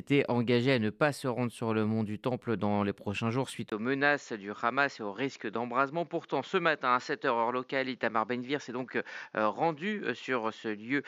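At 3.70 s, right after "les prochains jours suite", the speech suddenly loses its top end and sounds duller and boxier through to the end, after a gap of about 20 ms. This is likely an input switched to a poorer device, whose narrower band cuts everything above 7.2 kHz. Loudness stays roughly the same, but a new faint noise floor, around 45 dB down, appears. A spectrogram shows a flat ceiling at 7.2 kHz, and the waveform shows a brief dropout at the switch.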